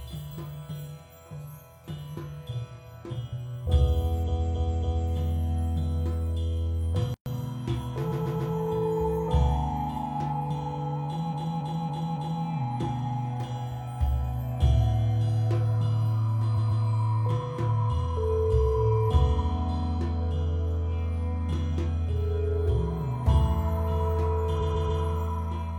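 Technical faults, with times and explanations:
4.23–5.07 s, 8.08–8.50 s, 11.29–12.40 s, 16.54–16.81 s and 24.57–24.99 s: repeated frames. A short block of coded audio plays again, two to four extra times. The blocks are 278.6 ms long at 4.23 and 11.29 s and 139.3 ms elsewhere. Each repeat gives a stutter that lengthens the audio.
7.14–7.26 s: playback stall. The sound stops mid-flow for 120 ms. The player likely ran short of data or its thread was blocked, so the output stayed silent until it recovered.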